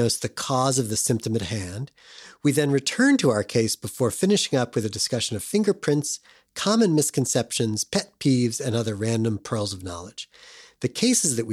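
No faults can be heard anywhere in the recording.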